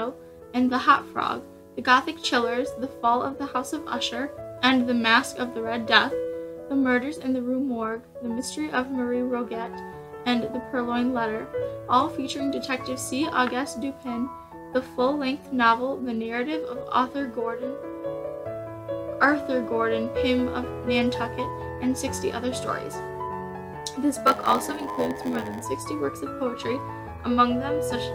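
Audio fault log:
24.26 to 25.62 s, block size mismatch (padded): A steady buzz at about 86.1 Hz sits under the sound here. One stage hands over blocks shorter than the next stage expects. The missing tail of each block is filled with silence. That leaves a tiny gap in every block, and the gaps repeat at the block rate to form the buzz. The rate fits a 512-sample read. The sound also runs slower, at 0.938 times normal speed, while its timbre stays about the same.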